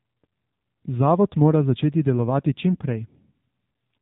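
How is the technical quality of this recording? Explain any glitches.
The recording is held back by mobile-codec coding throughout. AMR narrowband mobile codec, across the whole clip: the speech has passed through a 2G/3G phone codec that models the vocal tract and excites it with a handful of pulses per short subframe, rebuilding the voice from that sparse description. Nothing above about 3.8 kHz survives, so sibilants sound dull and boxed in, and the damage is plainly audible as a buzzy, synthetic edge, which fits a low rate around 7.4 kbps.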